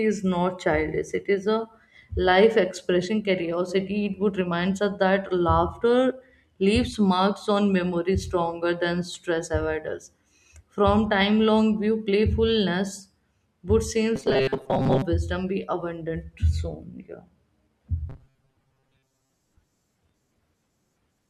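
From 14.16 to 15.02 s and again from 18.10 to 19.35 s the speech turns into robotic sound from repeated short buffers: a rigid metallic buzz at 133 Hz. This is likely a roughly 7.5 ms buffer being replayed when new audio arrives too seldom, covering about 70% and then about half of each stretch.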